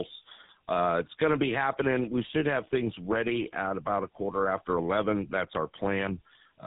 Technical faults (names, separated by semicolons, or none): tandem speech coding